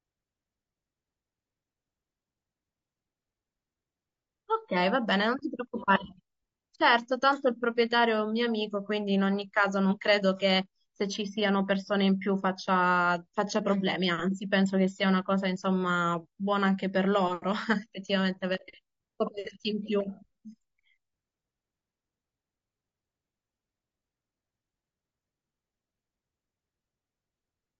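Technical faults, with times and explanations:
Throughout, low-delay AAC compression: The speech sounds rough and grainy for the whole clip, and the damage is plainly audible. The likely cause is AAC-ELD, the low-delay codec used for video calls. It codes about 500 frequency lines a frame with a low-delay window, and at low bitrates it quantizes them coarsely. Noise fills the gaps between the harmonics. The grain fits a low bitrate of around 32 kbps, where too few bits remain for the fine detail.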